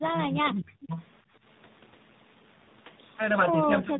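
From start to finish the speech carries tandem speech coding: it has passed through two speech codecs in a row, with the second coding the first one's already damaged output. Nothing survives above 3.8 kHz, which fits a narrowband call. The result is a rough, muffled, warbly sound that points to a low-rate ADPCM stage followed by AMR-NB at a low bitrate. Unlike a single low-bitrate codec, the compounded graininess and swirl sound more damaged than band-limiting alone explains.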